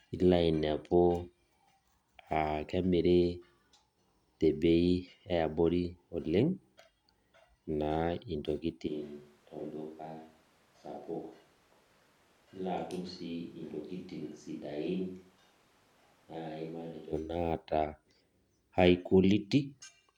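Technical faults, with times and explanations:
8.89–17.11 s, switch to a distant microphone: At 8.89 s the speech suddenly turns roomy and hollow. The bass thins out and the level drops by roughly 10 dB. Background noise rises to sit only about 25 dB below the speech. At 17.11 s the close, full sound returns just as abruptly. The likely cause is that the close microphone's signal dropped out and a microphone further away, such as a camera's, filled in. It captures more room reflection than direct sound.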